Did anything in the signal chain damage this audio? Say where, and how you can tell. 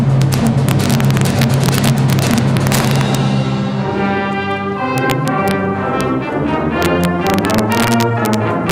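Yes. Integer overflow in a fixed-point gain or sample-format conversion stage runs through the whole clip: pushed about 2 dB too hot, a small fraction of peaks wrap to the opposite sign. Those peaks give violent cracks, far sharper than clipping's flattened buzz.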